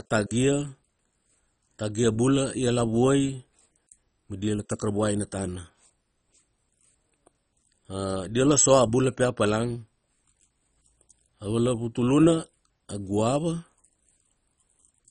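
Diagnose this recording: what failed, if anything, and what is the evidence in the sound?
Throughout the speech the sound is dull and gurgling, with a granular roughness and nothing above 10.4 kHz. This is a codec failure, likely MP2 compression: short of bits, it switches off upper sub-bands and coarsely quantises the rest, which fits a rate near 32 kbps.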